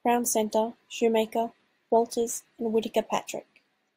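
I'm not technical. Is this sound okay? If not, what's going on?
No. From 2.01 s to the end, the speech picks up a faint hiss and roughness on loud, bright sounds. This is sample clock jitter: the recorder's timing clock wobbles by millionths of a second.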